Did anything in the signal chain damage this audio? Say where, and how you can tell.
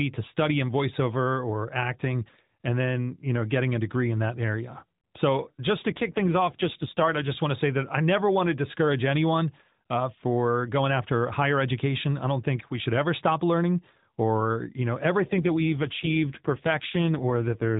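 Yes. AMR rate drop, in the mobile network and codec stage, from 5.9 to 7.36 s and from 15.24 s to the end: the speech turns buzzier and more synthetic with no gap and no loss of band, which fits the link forcing AMR from 12.2 down to 5.9 kbps.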